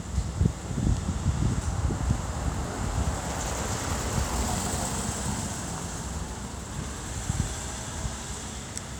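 From 3.30 to 4.76 s, processor overload crackle tears through the sound. The processor misses a long run of tiny buffer deadlines, roughly 0.7 ms each. Each miss drops in a hard-edged silent gap. Together they sound like gritty crackle. It stops when the load clears.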